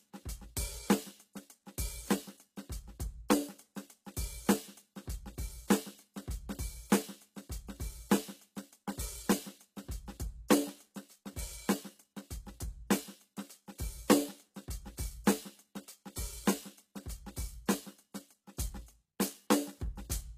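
Codec damage is plainly audible throughout the music, and nothing sounds above 14.9 kHz. Likely HE-AAC compression, rebuilding treble from copied lower bands, which fits a bitrate near 20 kbps.

At 17.66 s there is pre-echo. Coding noise spread across a block leaks 17 ms ahead of a sharp attack. A brief hiss precedes it and smears it.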